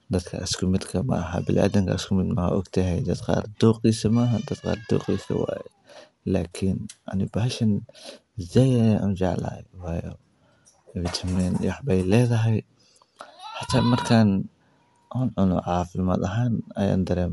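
A speech recording that has likely passed through Bluetooth LC3 compression, at a rate and frame size consistent with about 48 kbps and 10 ms frames. Throughout, nothing survives above 11.5 kHz, and the upper band carries a plainly audible breathy, grainy texture where detail has been replaced by noise.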